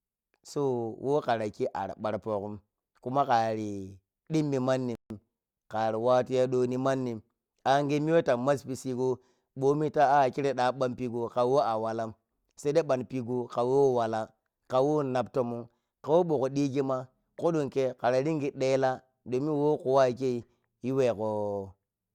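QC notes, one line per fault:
4.95–5.10 s, playback stall: after "kuma kari dimmi" the speech cuts to 150 ms of silence, a flat waveform and blank spectrogram band, likely from the player running short of data.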